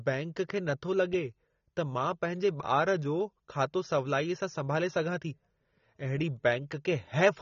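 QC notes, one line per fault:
Throughout, AAC compression: the speech is dull and smeared, with nothing above 6.9 kHz and a warbling, fizzy texture on sustained sounds and sibilants, likely from a low-bitrate AAC-LC encode, around 24 kbps, that lowered the cut-off and starved bands of detail.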